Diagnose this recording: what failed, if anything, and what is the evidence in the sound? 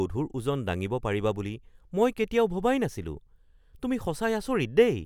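Nothing in the speech signal points to a failure at any stage of the chain, with no dropouts, discontinuities or level disturbances to be heard anywhere in the recording.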